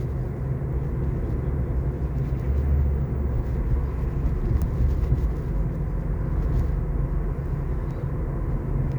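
Throughout, quiet passages turn gritty, with grain about 45 dB down. It is likely low bit depth without dither: the grain follows the sound rather than staying steady like hiss, which fits 9-bit rounding.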